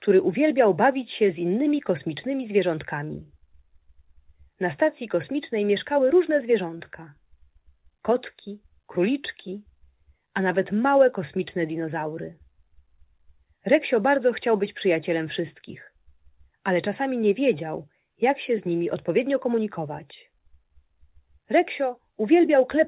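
Short concealed packet loss occurs twice, from 6.78 to 6.82 s and from 9.50 to 9.53 s. Each time, about 20 ms of audio arrived too late for the decoder. The receiver covered the gap by extending the preceding sound for roughly 18 ms and then 14 ms before crossfading back. Each gap is heard as a brief smear or wobble, within a band that stops at 4 kHz, as the call codec limits it.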